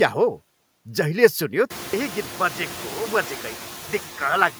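Noise suppressor artifacts run through the whole clip. The suppressor pulls steady background down by about 4 dB frame by frame, so the noise sinks between the words and rises under them. At 1.73 s, just after the room noise rises, a 200 ms silence precedes a duller, slightly quieter sound with a very low noise floor. This is likely an input switched to a poorer device, and it continues to the end.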